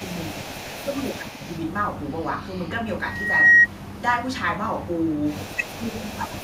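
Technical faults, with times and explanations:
0.0–0.75 s and 1.28–1.59 s, echo leak: a faint delayed copy trails the speech by 159 ms, about 20 dB then about 25 dB down, likely from a loudspeaker echo canceller letting residue through; spectrograms show ghosted, offset harmonics.
0.44–1.45 s and 5.56 s to the end, speech suppressed in double talk: the talker dips by roughly 10 dB in chopped patches, likely the canceller ducking during overlapping talk; the waveform envelope shows notched gaps.
3.04–3.67 s, loudspeaker feedback squeal: a 1.9 kHz tone swells over roughly 0.4 s to about 15 dB above the signal as the mic–speaker loop runs away; spectrograms show one bright horizontal line.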